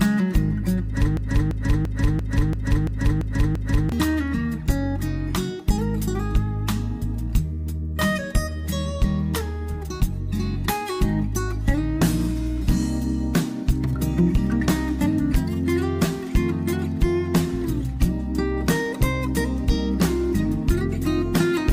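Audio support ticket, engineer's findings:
Broken-record loop, 1.17 s to 3.92 s: a 340 ms fragment repeats exactly, back to back, eight times. Likely a player, encoder or stream stall resending its last held buffer. The audio that belonged in that span is lost.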